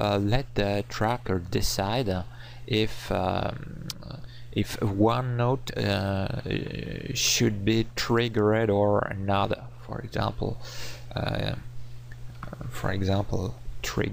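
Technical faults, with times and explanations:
Throughout, mains hum: a steady 60 Hz drone sits roughly 20 dB under the audio, the power line leaking in through a ground loop or nearby transformer.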